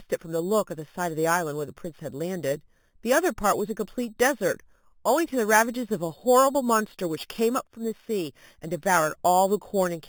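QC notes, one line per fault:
Throughout: imaging from sample-and-hold upsampling. 8 kHz speech held up to 48 kHz without smoothing mirrors into 4 to 8 kHz, about -15 dB, a metallic fizz.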